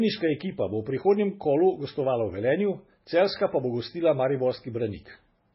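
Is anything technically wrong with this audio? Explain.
Yes. Throughout the speech, the sound has the watery, swirly texture and dull top end of heavy MP3 compression, likely from a very low bitrate, around 16 kbps. Starved of bits, the encoder cuts everything above 5.6 kHz and zeroes weaker frequency lines, which flicker in and out between frames. On a spectrogram this shows as a hard, flat ceiling at 5.6 kHz with blotchy, patchy energy beneath it. S sounds turn metallic and consonant attacks smear.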